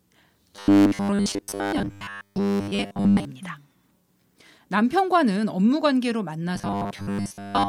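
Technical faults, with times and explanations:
0.56 to 3.25 s and 6.56 to 7.68 s, robotic sound from repeated short buffers: the speech becomes a rigid 100 Hz metallic buzz, likely from a 10 ms chunk looping while most real audio is skipped. On a spectrogram this appears as evenly spaced horizontal harmonic stripes.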